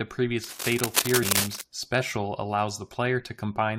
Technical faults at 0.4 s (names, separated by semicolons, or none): cable scratch noise